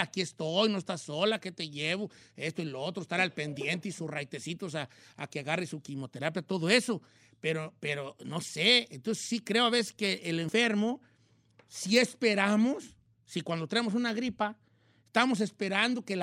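No technical faults can be heard at any point in the speech.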